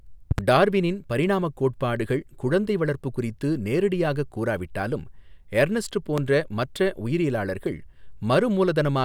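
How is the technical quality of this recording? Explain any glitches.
The speech is marred by three loud pops. At 0.31–0.41 s a double pop sounds, and at 6.18–6.20 s a single one, each roughly 15 dB above the speech, which continues underneath. Likely a voltage step from a plug, switch or static discharge, shaped by downstream circuitry into sharp thumps.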